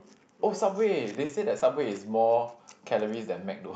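At 1.25 s and again at 1.59 s, the speech shows short concealed packet loss. About 40 ms, then 20 ms, arrived too late. The decoder stretched the preceding sound to cover each gap. Both spots smear briefly before the real audio returns.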